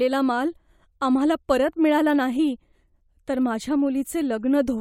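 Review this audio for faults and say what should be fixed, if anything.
No faults can be heard in this speech recording. Nothing needs to be fixed.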